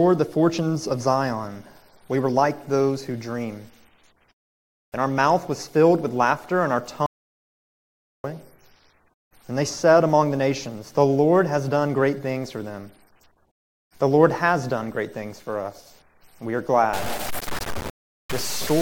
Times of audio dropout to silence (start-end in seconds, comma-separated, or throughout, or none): 7.06-8.24